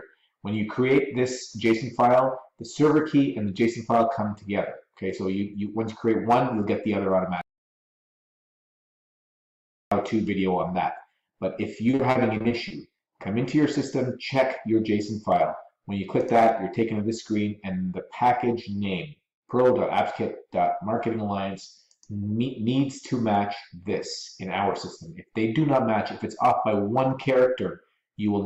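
The audio has two separate faults. From 7.41 to 9.92 s there is an audio dropout to silence lasting about 2.5 s. The sound stops abruptly and restarts just as abruptly, and the gap is silent with no room tone. On a waveform this appears as a flat line, and on a spectrogram as a fully black block with hard vertical edges. The cause is likely a lost input, such as a disconnected device, a failed link or an accidental mute, while the recorder kept writing silence. The second fault is repeated packet loss (robotic sound) between 11.91 and 13.00 s. Across this stretch the flow breaks into about eight short holes, none longer than 40 ms. Roughly 210 ms is patched by stretching the preceding sound, and about 160 ms is simply missing, so around a fifth of the span is concealed. The result is choppy. On a spectrogram the harmonics smear into flat, repeated bands broken by thin vertical gaps. On a waveform the stretch shows looped, uniform cycles and small notches.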